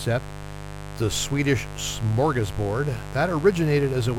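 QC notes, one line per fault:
Throughout: mains buzz, a steady raspy 50 Hz buzz with harmonics into the kilohertz range, fairly loud against the speech, unlike a smooth pure hum.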